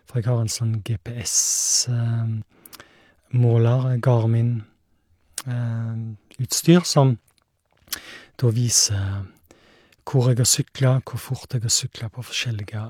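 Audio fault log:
2.42–2.44 s and 6.39–6.41 s, overlap between stream segments: where 4 s segments join, about 20–26 ms of speech is trimmed away, so the waveform jumps and a tiny skip results. Unlike a dropout, no silence is inserted; time is lost instead.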